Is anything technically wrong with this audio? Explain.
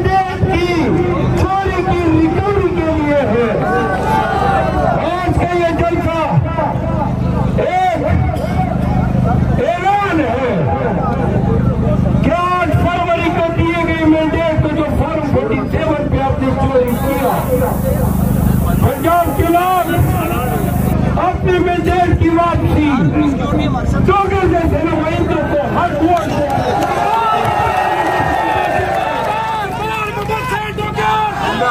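Yes. From 16.88 to 20.93 s the audio shows low bit depth with noise shaping. The signal is reduced to roughly 6 bits, and the rounding error from that coarse quantisation is fed back so the error energy is pushed toward the high frequencies. The result is a steady, thin hiss that climbs sharply toward the top of the band, sitting only around 15 dB below the signal, then disappears when full resolution returns.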